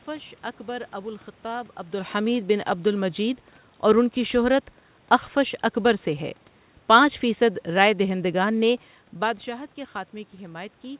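Nothing here goes wrong on the technical side: the room noise is simply part of the recording, the shifts in level around 1.5 s and 9 s are just the talker moving relative to the microphone, and the absence of anything above 4 kHz is what a G.711 call path normally sounds like.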